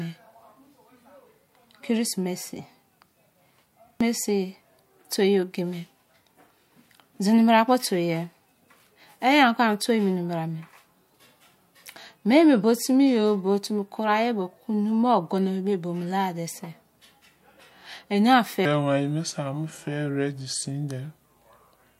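From 18.65 s to the end of the clip, a section at the wrong speed plays back at 0.79 times its recorded rate, so the speech turns slow and drops about four semitones in pitch. The likely cause is that this segment was resampled or clocked at a mismatched rate.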